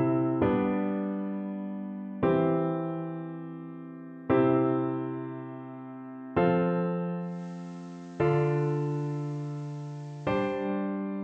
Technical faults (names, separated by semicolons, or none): digital radio blending to analogue